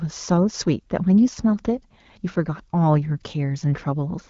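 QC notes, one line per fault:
The speech signal is intact, carried by the AMR wideband (HD Voice) codec at a rate consistent with 12.65 kbit/s, which leaves the band up to 7 kHz with only light coding texture.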